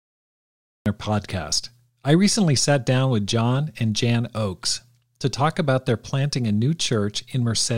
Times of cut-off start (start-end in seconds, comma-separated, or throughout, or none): 0.00-0.86